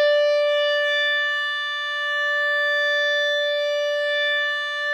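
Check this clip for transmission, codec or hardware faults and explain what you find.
Nothing wrong turns up in this bit of music, so there's nothing here to pin on the transmission, the codec or the hardware.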